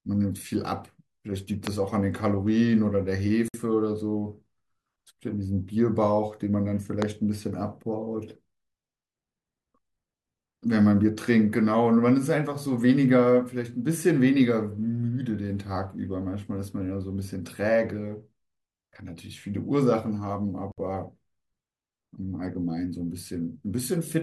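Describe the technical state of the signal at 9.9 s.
The audio is intact at 9.9 s, with no audible fault at that moment.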